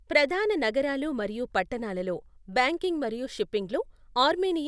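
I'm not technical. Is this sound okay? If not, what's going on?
Yes, nothing in this recording stood out as a problem when I listened to it.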